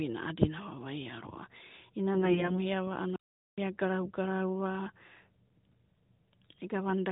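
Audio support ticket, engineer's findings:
AMR bit errors, 2.14 to 2.62 s: speech turns hoarse, scratchy and gargly while pitch and level roughly hold. The audio is AMR-NB at a rate consistent with 12.2 kbps, with everything above 4 kHz cut, as normal for that codec. Probable component is the radio link or decoder input. The weakly protected bits in each 20 ms frame arrive corrupted at around 7 percent while the checksum on the important bits still passes. Excitation pulses land in the wrong positions, and the finer pitch, gain and spectral parameters are off across 19 frames.

Playback stall, 3.16 to 3.58 s: output drops to silence mid-flow for about 0.42 s, then resumes. Probable component is the player output path, likely buffer underrun or a blocked playback thread. With no data reaching the output, the device holds silence until feeding recovers.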